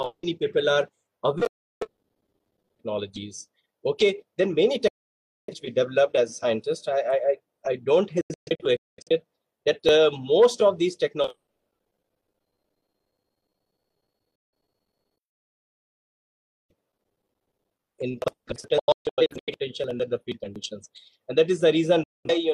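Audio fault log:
1.47–1.87 s, digital broadcast dropout: the sound snaps to silence within about 3 ms for roughly 0.34 s, as the receiver mutes over failed frames.
4.88–5.54 s, digital broadcast dropout: a longer hole of about 0.6 s with the same abrupt mute, as the receiver waits for good frames to return.
8.21–9.11 s, digital broadcast dropout: a cluster of short holes totalling about 0.51 s across 0.85 s, the longest 0.21 s, as intermittent reception lets scattered frames through.
14.35–14.53 s, digital broadcast dropout: a brief 0.17 s gap, cut in and out sharply, where the audio sent meanwhile is lost.
18.79–19.53 s, digital broadcast dropout: a stuttering run of holes totalling about 0.43 s over 0.68 s, none longer than 0.13 s, from patchy signal recovery.
22.03–22.30 s, digital broadcast dropout: a final 0.21 s silence with the same quick mute, the lost material never returning. The gap sizes fit frames of roughly 43 ms.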